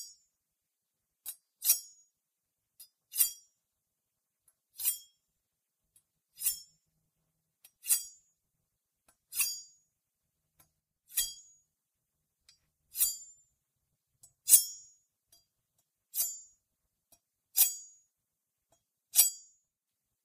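At 10.80 s the level drops suddenly by about 6 dB. It stays down until 11.17 s, then jumps back. The same dip returns from 19.29 s to 19.88 s. Each step is abrupt, with no fade. Any sound that sat in just the lost side vanishes during these stretches. The likely cause is one channel drops out. The mono sum then loses half of what both sides shared, and all of what only the lost side carried.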